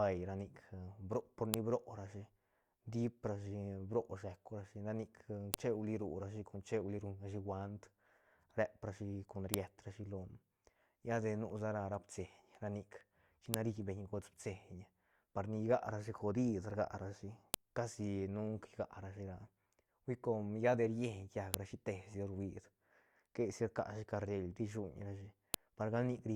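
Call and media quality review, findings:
WAV segments concatenated with headers intact; header bytes decoded as samples. File header played as audio: sharp, loud click at each 4 s segment boundary, at 1.54, 5.54, 9.54, 13.54, 17.54, 21.54 and 25.54 s, independent of the speech underneath. Likely stream assembler or joiner stage.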